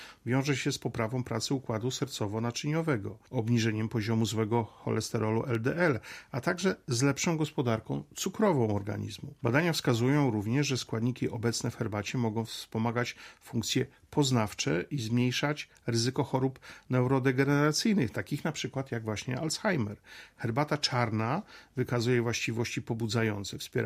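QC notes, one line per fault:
5.55 s, block of digital silence: the output buffer was apparently not filled in time, so a chunk of about 1.3 ms, consistent with a 64-sample block, dropped to zeros. The abrupt cut to silence and back leaves no audible hole, just a tick or dip.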